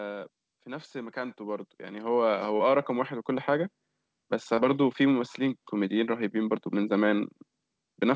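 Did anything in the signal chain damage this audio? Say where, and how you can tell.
Yes. Automatic gain rising, 0.64 to 3.17 s, in the call processing stage: speech and background noise swell together by about 11 dB over roughly two and a half seconds. The gain control judged the input too quiet and raised its gain gradually.

Short concealed packet loss at 2.57 to 2.63 s and 4.55 to 4.60 s, in the network and jitter buffer: brief smears where about 30 ms never arrived. The decoder extended the preceding sound, then blended back, within a band capped near 8 kHz that fits a wideband call codec.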